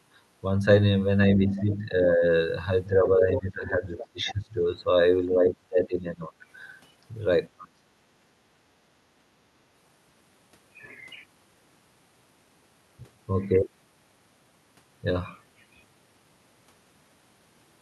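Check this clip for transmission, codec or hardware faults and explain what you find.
Two kinds of fault are audible, both in the first eight seconds and both tied to echo cancellation. The call path itself shows Opus-style coding, with audio band-limited near 12 kHz, which fits a 64 kbps setting.

Speech suppressed in double talk occurs at 1.33–2.28 s, 2.89–4.86 s, 5.33–6.32 s and 7.53–7.92 s. The speech level dips, by about 10 dB, 15 dB, 15 dB and 25 dB at the deepest points. The likely cause is an echo canceller that treated overlapping far-end audio as echo and attenuated the near talker along with it.

The other side's voice leaking through is heard at 1.47–1.61 s as a faint scrap about 25 dB below the speech. It returns at 3.3–4.34 s, much more prominent at about 10 dB below. This is likely residual loudspeaker echo that the canceller failed to subtract from the microphone signal during double talk.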